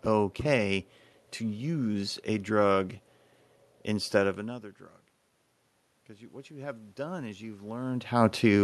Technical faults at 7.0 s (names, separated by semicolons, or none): automatic gain rising